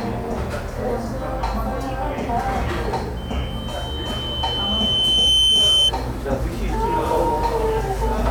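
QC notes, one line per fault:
3.16–5.92 s, loudspeaker feedback squeal: a 3.1 kHz tone swells over roughly two seconds to about 10 dB above the sound as the mic-speaker loop runs away.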